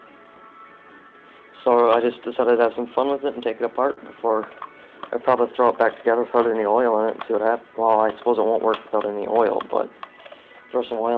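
Clock drift between sender and receiver runs through the whole clip. The sender's clock is about 3 percent slow, so the jitter buffer keeps draining. Unlike random network jitter, the resulting hiccups all lean the same way, toward stretching rather than cutting, and never settle.

Repeated timing corrections span 0.04 s to 10.99 s. The receiver keeps inserting short repeated slivers to cover the shortfall, playing at 98% speed and adding around a third of a second overall. Nothing is lost, which separates this from dropouts. The only trace is a faintly unsteady, dragging tempo with small unevenly spaced stutters.

A short stall from a late packet runs from 3.93 s to 3.99 s. The buffer ran empty, and the receiver held the last sound for 43 ms, then resumed exactly where it left off, so nothing is missing. This differs from packet-loss concealment because no content is skipped. It is heard as one brief held smear with a slight buzz or dip, through a G.722 call path with nothing above 8 kHz.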